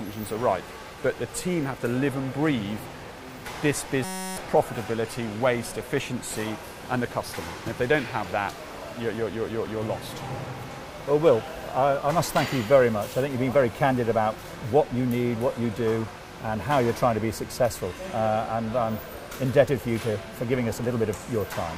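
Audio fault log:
4.04–4.37 s, system hang loop: the sound abruptly gives way to a steady, harsh buzz pitched at about 188 Hz, lasting about a third of a second before normal playback resumes. The computer or driver stalled while the audio hardware kept replaying the same tiny stretch of its buffer. Each 5.33 ms slice, which fits a 256-sample buffer, repeats around sixty times, so the repetition rate itself becomes the buzz, and roughly 300 ms of real audio is lost.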